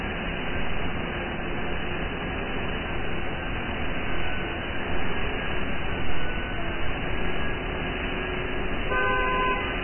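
From start to finish, the audio has most likely passed through Vorbis compression run at a very low rate, which fits roughly 11 kbps. The encoder saved bits by cutting everything above 3 kHz and coarsely quantising the remaining upper band, swapping its fine detail for noise of similar energy. The damage is heavy: the sound is dull yet hissy and grainy, tones come out rough, and sharp onsets are blurred.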